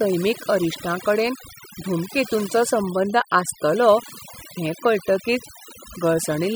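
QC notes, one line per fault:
Throughout, overdone noise removal: the noise reduction was set too hard, switching off bands near the noise level. Background drops and breaks up into twinkling specks.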